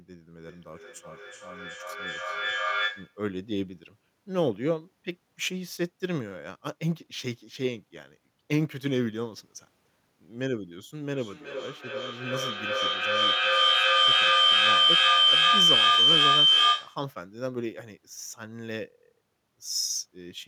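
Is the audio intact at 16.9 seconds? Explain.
No. From 11.03 to 17.12 s a feedback howl runs: the microphone-to-loudspeaker loop keeps adding gain, so a tone around 3 kHz swells to about 9 dB above the speech, with the loop repeating roughly every 0.4 s. It shows as a bright horizontal spectrogram line and a swelling waveform envelope.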